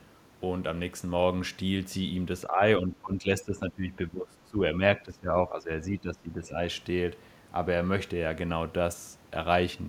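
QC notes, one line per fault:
2.47–2.61 s, speech suppressed in double talk: a brief dip of around 10 dB, likely the echo canceller ducking the talker while the far side spoke.
2.78–4.6 s, speech suppressed in double talk: deeper, patchy drops of about 15 dB across most of this stretch, likely as the canceller clamps down on overlapping talk.
5.0–6.58 s, speech suppressed in double talk: same again, roughly 15 dB down in chunks for well over a second, likely because the suppression can't separate the talker from the echo.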